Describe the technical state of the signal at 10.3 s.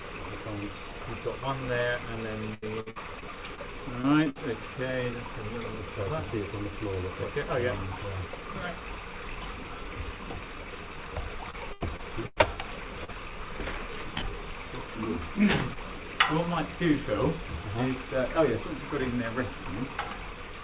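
At 10.3 s the audio is intact, with no dropout, glitch or distortion, just the steady narrowband sound of the call path, which has nothing above 4 kHz and fits a G.711 mu-law telephone codec.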